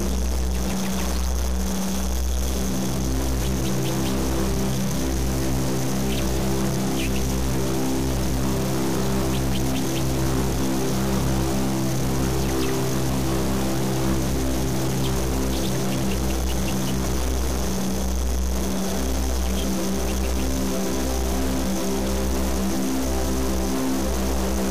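Processor, graphics or mouse load is disturbing the shared ground of the audio circuit, so computer activity noise runs through the whole recording: a chirping buzz pulsing around 300 times a second, roughly 35 dB below the sound, rising and falling with the machine's activity rather than with the audio. Harsh, buzzy distortion is also present throughout, and pauses fill with noise instead of falling silent. The likely cause is a stuck bit, one data line held at a fixed value with a step of around -25 dBFS, which knocks about half the samples off by that amount and flips with the sign of small values near silence.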